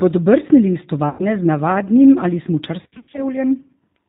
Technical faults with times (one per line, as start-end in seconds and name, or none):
0.00-4.09 G.729 codec
1.09-1.26 VoIP packet loss concealed by the speech codec
2.82-3.23 VoIP packet loss concealed by the speech codec